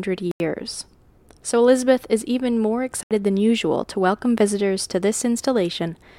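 At 0.31 s and again at 3.03 s the speech cuts to silence for about 87 ms and 77 ms, then resumes where it left off, a pattern that likely points to a Bluetooth stall. Unlike a concealed packet loss, the gap is true silence rather than smeared or repeated sound.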